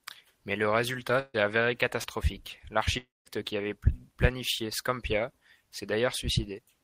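Just after "le résultat", from 1.19 to 1.36 s, a burst of packet loss removes about 140 ms of speech. The receiver carries the last sound forward and turns it down, so it comes out as a held, fading continuation. The final 30 ms or so go silent before the speech resumes further along. It is longer than a brief smear, yet it never settles into an extended silence, which distinguishes it from both neighbouring faults.

Between 2.02 and 2.06 s, a short concealed packet loss costs only about 20 ms of audio. The decoder bridges the gap by extending the preceding sound and then blending back into the real signal. This leaves a quick smear or wobble rather than any audible fade or break. Because the patch is so short, nothing sounds held, and that is what separates it from the burst before it.

From 2.98 to 3.27 s, just before "qui avait planifié", about 0.28 s of speech disappears. The last sound is extended as a decaying buzz or hiss, which thins out into roughly 0.19 s of silence, and the speech then picks up later without the missing part. 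The cause is likely a long network dropout. The clear silent stretch after the fade sets it apart from the shorter burst at 1.19 s, where the silence was barely there.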